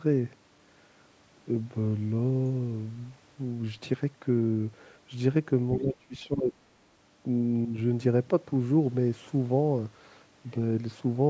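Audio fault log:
5.77–6.54 s, speech suppressed in double talk: the speech sinks by about 10 dB for roughly 0.7 s, likely because the echo canceller heard both ends talking at once, mistook the near talker for loudspeaker echo and attenuated it.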